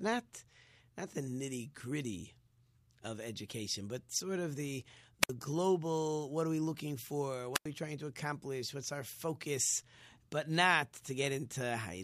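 At 5.22 s, just after "but sort of the", a wireless microphone squelch dropout hits. The radio signal from the microphone fades. The receiver's squelch mutes the output. A short burst of hiss gives way to near silence for about 58 ms. It happens again from 7.54 to 7.66 s, after "are we looking for". This mute lasts about 92 ms. The sound comes back on "we trying to accomplish".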